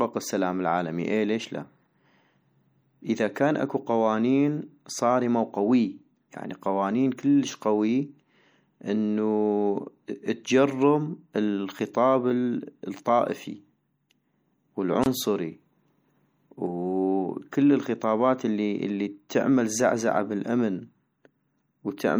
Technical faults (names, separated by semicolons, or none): MP3 compression; gap at a join of encoded pieces